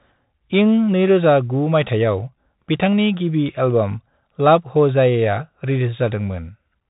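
Bluetooth CVSD headset codec damage runs through the whole speech clip, and it is plainly audible. The audio was carried over a narrowband headset link at 64 kbps that encodes each sample as a single up-or-down bit with an adapting step, so nothing above 3.8 kHz survives. Loud bright passages outrun the step size and distort, s sounds come out scratchy, and a granular hiss sits beneath the speech from start to finish.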